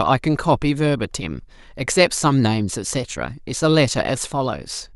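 No technical faults can be heard anywhere in the speech recording; the signal holds steady throughout without any disruption.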